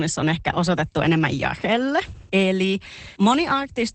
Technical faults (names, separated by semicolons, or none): Opus voice compression